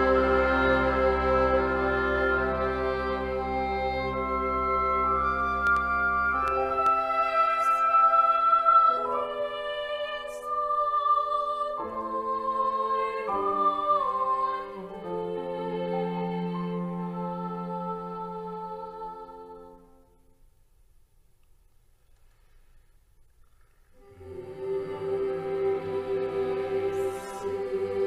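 From 5.67 to 6.87 s there's a train of clicks, about four uneven pops at roughly 2.5 per second, poking well above the sound, likely from nearby interference.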